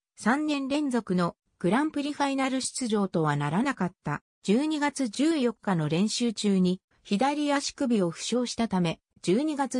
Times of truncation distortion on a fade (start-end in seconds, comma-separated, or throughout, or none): none